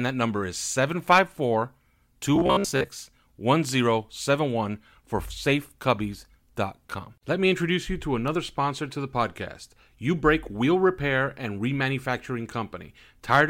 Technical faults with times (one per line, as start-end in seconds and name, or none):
1.10-1.19 hard clipping
2.36-2.88 robotic sound from repeated short buffers
13.32-13.40 hard clipping